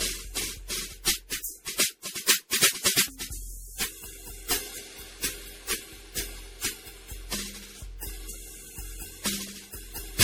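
From start to finish the music carries generation loss, its likely cause being repeated lossy encoding, around ten passes through MP3 at a rate the artefacts suggest is near 64 kbit/s. Each pass requantises on a shifted frame grid, so noise and spectral gaps pile up. What separates this from a single low-bitrate encode is the degree of swirling, hollow smearing and the blurred attacks, worse than that rate alone would produce.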